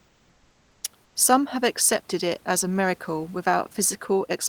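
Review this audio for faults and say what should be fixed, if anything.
Comfort noise in place of the background appears from 0.0 to 0.83 s and again from 1.04 to 1.15 s. In both pauses the real room noise, which sits about 36 dB under the speech, gives way to a steady, featureless hiss about 1 dB and 2 dB quieter respectively. The likely cause is discontinuous transmission such as Opus DTX: the sender goes quiet when it detects no speech, and the receiver synthesises roughly matching noise. Unlike a noise gate or suppressor, the gaps never drop to silence or pump. The texture flattens while the level barely moves. Disabling DTX on the sending encoder, or raising its voice-activity sensitivity, would keep the real background continuous.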